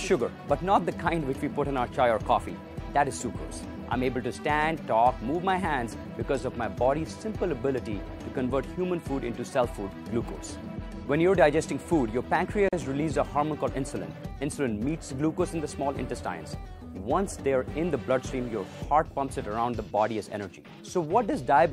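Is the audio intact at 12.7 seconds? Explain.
No. From 12.69 to 12.73 s the sound drops out into a gap of about 42 ms, with edges smeared by the codec, and then resumes exactly where it left off. This is a gap at a join of encoded pieces: two separately encoded segments were spliced without trimming, so the padding at the end of the first segment's last frame and the start-up delay at the beginning of the second both remain as dead air.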